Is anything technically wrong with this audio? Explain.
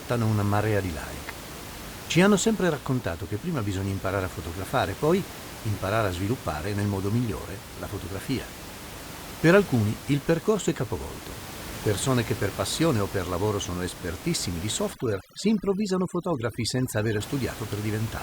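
Yes. From 14.93 to 17.21 s, just after "lavoro sono espertissimi di", the background drops and breaks up into twinkling specks. This is overdone noise removal: an over-aggressive reduction stage mutes frequency bands resembling its noise estimate, stripping quieter speech components along with the room noise, which otherwise sits about 14 dB below the speech.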